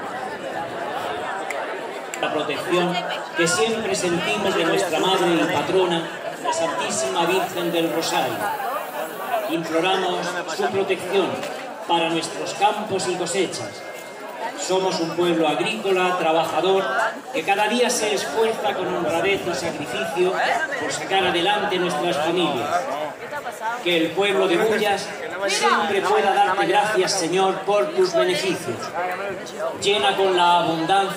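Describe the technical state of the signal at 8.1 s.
At 8.1 s the signal is in a stretch of low bit depth with noise shaping, running from 7.27 to 9.54 s. The audio is reduced to a resolution that fits roughly 7 bits, and the rounding error is pushed upward in frequency, giving a steady, thin hiss climbing sharply toward the top of the band, only around 15 dB under the signal. Plain truncation would instead leave a flatter, grittier distortion that follows the signal's level.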